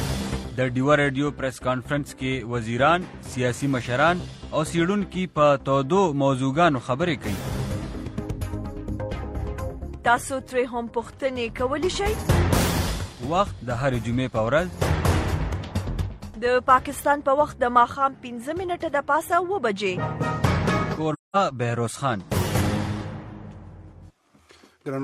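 Near the end of the audio, from 21.13 to 21.36 s, the sound vanishes for about 213 ms. This is AAC frame loss with muting. The decoder received nothing for a run of frames, a gap that fits five lost frames, so it set their spectrum to zero. What sets it apart from a hard digital dropout is the edges. The overlapping transform windows fade the sound out and back in over roughly a frame, leaving a soft-edged silent hole.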